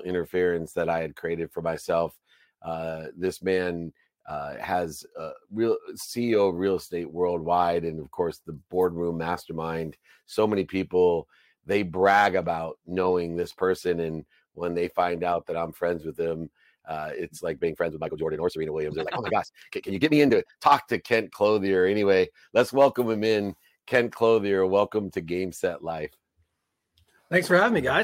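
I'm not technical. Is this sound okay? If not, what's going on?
No. From 17.6 to 20.7 s there's a time-stretched section: the sound suddenly rushes at about 1.6 times speed, but, unlike a sped-up tape, the pitch doesn't rise. It was likely squeezed by software to fit a length.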